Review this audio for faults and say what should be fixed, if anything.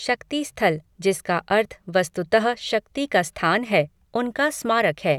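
No faults found in the speech recording and nothing needs fixing.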